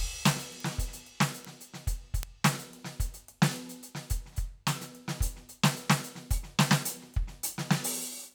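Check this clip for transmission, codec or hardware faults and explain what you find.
The music carries four bit error spikes, at 0.60, 1.45, 2.23 and 3.72 s. Each is a single flipped bit in the digital data. The sample value jumps by a power of two and snaps straight back. The spike at 2.23 s spans two samples; the others span one. They peak around -25, -19, -13 and -25 dBFS. Each is heard as one sharp, broadband tick, unrelated to the music around it.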